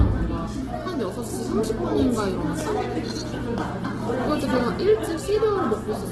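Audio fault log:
Throughout, Opus compression: rough, grainy sound with nothing above 12.2 kHz, likely a music-mode encoder filling bit-starved bands with noise near 12 kbps.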